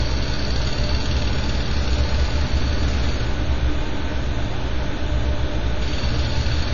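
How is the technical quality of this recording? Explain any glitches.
The technical quality is poor, with codec damage plainly audible from start to finish, most likely AAC compression. Nothing sounds above about 6.9 kHz, so the top end is gone and the audio is dull. The encoder cuts the audio into frames of 1,024 frequency lines and spends its few bits only where hearing is most sensitive, which fits a low bitrate around 24 kbps. What sets this apart from a simple low-pass filter is the smeared, warbling, fizzy texture in the remaining bands.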